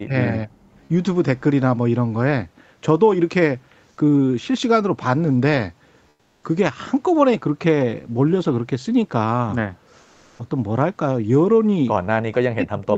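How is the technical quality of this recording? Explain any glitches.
The recording has two kinds of fault: speech suppressed in double talk at the start and end, and comfort noise replacing the background in two short pauses. The speech carries nothing above 8 kHz, as expected from the call path.

Speech suppressed in double talk, at 0.0 to 0.15 s, 0.31 to 0.64 s, and from 12.25 s to the end of the clip: the speech drops by roughly 40 dB at its deepest. The likely cause is an echo canceller that heard far-end audio on the loudspeaker while this side was talking, could not tell the local talker from the echo, and turned both down.

Comfort noise in place of the background, at 6.09 to 6.43 s (340 ms) and 10.01 to 10.39 s (380 ms): during these pauses the real background is swapped for a smoother synthetic noise. It is about 7 dB quieter in the first pause and about 1 dB quieter in the second. 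This is likely discontinuous transmission: the sender's voice detector stopped sending during silence, which fits Opus DTX, and the receiver filled the gap with generated noise.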